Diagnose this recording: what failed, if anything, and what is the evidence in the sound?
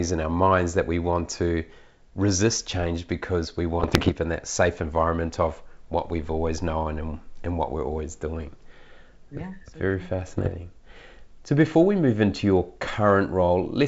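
What failed is the transmission link feeding the decoder: bit errors on an ADPCM link. There are two bursts of pops and gritty roughness, with brief level jumps. One runs from 3.80 to 4.12 s, between "resist change because we" and "in that safe environment". The other runs from 10.26 to 10.55 s. Each flipped bit throws off the decoder's step size and predictor, so the damage rings on briefly. The error rate sounds like roughly one to two percent. The clean wideband G.722 sound fits a 64 kbit/s mode.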